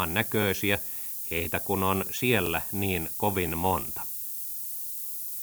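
Throughout the speech there is low bit depth with noise shaping: a steady hiss, nearly as loud as the voice, tilted sharply toward the treble, which fits roughly 6-bit rounding. Broadband dither would sound flatter. Overlapping chunks appear at 0.42–0.44, 1.44–1.46 (just before "kun on"), 2.46–2.48 (just after "kun on"), 3.48–3.50 and 4.50–4.52 s. Each 1-second chunk restarts 20 ms early, replaying that sliver as a regular stutter rather than a random dropout gap.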